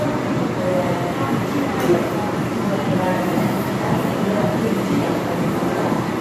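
Periodic USB or driver dropouts from 0.54 to 6.04 s: every 0.5 s a tiny sliver of sound is skipped, producing about ten regular ticks.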